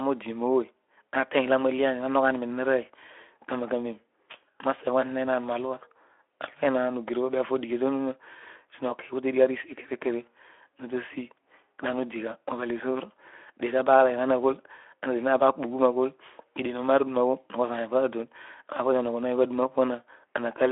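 Listening to this speech recording, nothing stood out as a technical problem.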